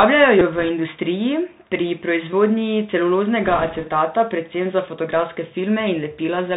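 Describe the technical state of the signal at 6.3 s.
At 6.3 s the speech sounds dull and scratchy over a granular hiss, from the Bluetooth CVSD headset codec running throughout: one-bit slope coding, consistent with 64 kbps, discards everything above 4 kHz.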